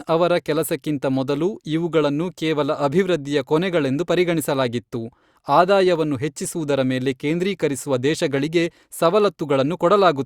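No technical faults can be heard at any point in the speech.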